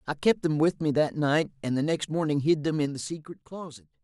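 Speech clip with zipper noise from 2.76 to 3.56 s: the level drops about 15 dB in audible 3 dB steps, roughly five per second, each ticking.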